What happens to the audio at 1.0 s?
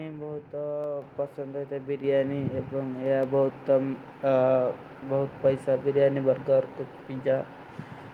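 At 1.02 s the microphone volume is stepped up: the call software judges the input too quiet and raises the device gain by about 6 dB in a single jump. The speech and the background noise both get louder at that instant and stay louder.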